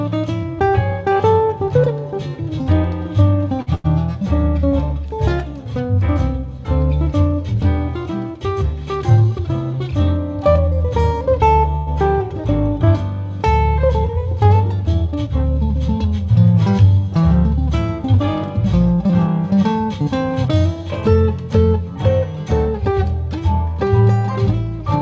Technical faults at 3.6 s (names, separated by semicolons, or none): short stall from a late packet